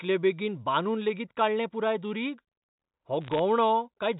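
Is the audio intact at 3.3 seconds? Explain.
No. From 3.22 to 3.39 s there are bit errors on a digital phone line: flipped bits in the G.711 stream each corrupt a single sample, and a small fraction of bits is hit. This produces sharp ticks and crackle while the speech underneath carries on unbroken, unlike packet loss, which leaves gaps.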